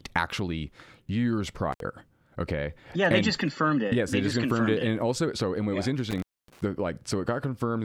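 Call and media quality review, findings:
Intermittent contact: speech dropouts with edge crackle and faint hiss, 1.72–1.80 s after "actually years" (about 63 ms open) and 6.10–6.61 s after "and what yeah was" (about 260 ms). Probable loose cable or plug.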